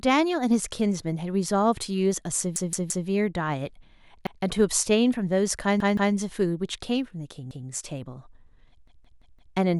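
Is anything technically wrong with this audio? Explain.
Yes. A repeated buffer occurs at 2.56, 4.27, 5.80, 7.51 and 8.88 s. New data arrived late, so the device replayed the last 171 ms chunk one to four extra times. It sounds like stuttering speech with a hard join at each repeat.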